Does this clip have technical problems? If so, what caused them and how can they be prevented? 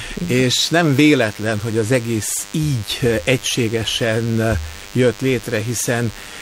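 Yes. A thin, steady buzz at 100 Hz, rich in harmonics, runs through the whole clip, roughly 20 dB below the main sound. This is DECT cordless phone buzz: a nearby handset or base station sends a radio burst every 10 ms, and the audio circuitry rectifies those bursts into an audible buzz. Keeping DECT phones and base stations well away from microphones, cables and audio interfaces prevents it.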